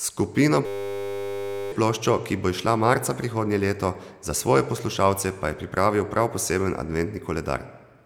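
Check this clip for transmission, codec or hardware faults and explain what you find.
One fault is present: a system hang loop from 0.66 to 1.72 s, just before "ploščo ki bo izšla". The driver froze while the hardware kept replaying a single 10 ms buffer. About a second of speech is lost to a steady 100 Hz buzz. A spectrogram shows flat harmonic lines 100 Hz apart, and the waveform shows one identical cycle repeating.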